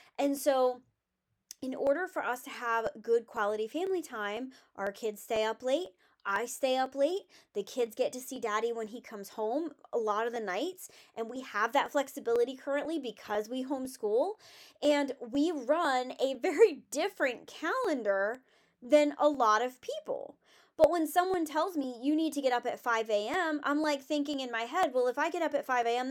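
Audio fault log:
0.37–25.83 s, periodic USB or driver dropouts: regular ticks every 0.5 s wherever speech sounds, likely a background task blocking the USB bus or driver, skipping about half a millisecond each time.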